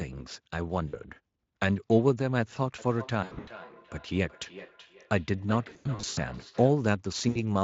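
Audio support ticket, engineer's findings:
VoIP packet loss concealed by the speech codec: dropouts at 0.87–0.96 s (about 60 ms missing), 3.23–3.49 s, 5.69–6.19 s and 7.29–7.44 s. The middle two are patchy bursts with gaps up to 80 ms. Decoder's stretching the last pitch and filter into a fading buzz or coloured noise, and it takes a beat to recover after each one.

Feedback echo between two devices from 2.78 to 6.87 s: sound comes back roughly every 400 ms, thin and ringy, loudest about 18 dB under the direct signal. Probably a second device in the room on the same call, playing this mic back into itself. Echo canceller can't catch it, since the sound isn't its own playback. The Speex coding underneath adds only light damage of its own.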